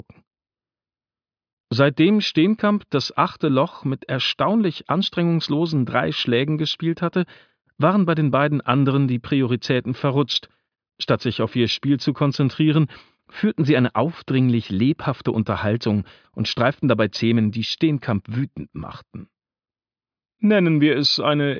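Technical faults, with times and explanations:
No technical faults can be heard in this clip.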